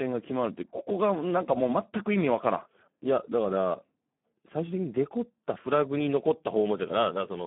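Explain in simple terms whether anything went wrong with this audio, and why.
Speex codec damage runs through the whole recording, from start to finish. Speex is an older speech codec from internet calling and game chat. At this low setting it keeps only a rough sketch of each sound, so the speech comes out hoarse and heavily noisy. It also passes only a narrow telephone-like band, roughly 150 Hz to 3.5 kHz, with nothing above about 3.8 kHz, which makes everything sound muffled and thin.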